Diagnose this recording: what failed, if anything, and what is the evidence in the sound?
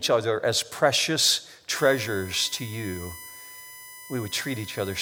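USB whine starts at 1.76 s, after "other as precious", and lasts to the end: a fixed 1 kHz tone, strongest at 2 kHz, roughly 15 dB under the speech. It enters through analogue wiring, as the bus's 1 ms frame current leaks through shared power or ground. A spectrogram shows steady horizontal lines at 1 and 2 kHz.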